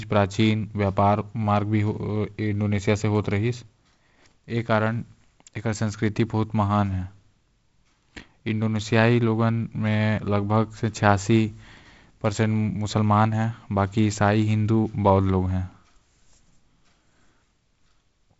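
No technical faults can be heard anywhere in the speech. It passes through G.722 wideband telephone coding, with nothing above about 7.7 kHz, a light hiss in the upper band, and slightly grainier lower-band detail, which fits the 48 kbit/s mode.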